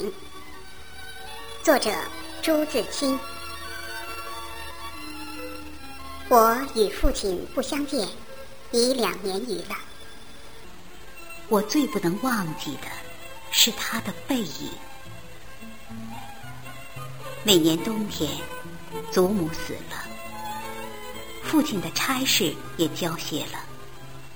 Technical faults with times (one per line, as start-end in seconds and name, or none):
0.00-10.64 section at the wrong speed